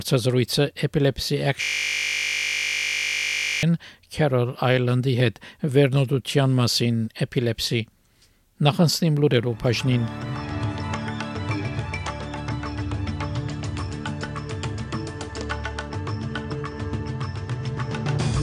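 At 1.62 s the sound locks up into a system hang loop that holds until 3.63 s. The machine or its audio driver froze, but the sound hardware kept replaying the same 20 ms stretch of its buffer, over and over, about a hundred times. Because that loop is so short, it comes out as a steady buzz at 50 Hz rather than a stutter, sitting there flat for two seconds before normal audio returns.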